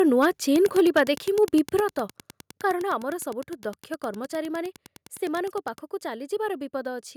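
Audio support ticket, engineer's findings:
Microphone overload, 0.00–0.26 s, 0.65–1.11 s, 1.43–1.55 s: harsh crackle on loud syllables, peaks about 3, 7 and 1 dB over full scale, likely input gain too high. Waveform shows flat-topped peaks, spectrogram shows broadband smear.

Wi-Fi interference, 0.49–5.88 s: ticking roughly 20 dB under the speech, repeating every 102.4 ms, so beacon pickup rectified in the audio circuit. Thin vertical stripes on the spectrogram.

Microphone volume stepped down, 0.80 s and 1.80 s: level drops by about 2 dB, then by about 6 dB, likely automatic gain control reacting to the clipping. Waveform envelope shrinks abruptly at each point.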